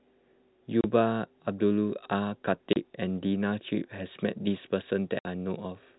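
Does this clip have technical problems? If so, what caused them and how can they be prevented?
Yes. Packet loss filled with silence cuts the speech at 0.81–0.84 s, 2.73–2.76 s and 5.19–5.25 s. Those 30, 30 and 60 ms gaps fit a 30 ms packet size. They show as blank vertical strips with sharp edges. Packet loss concealment and a jitter buffer would mask such losses.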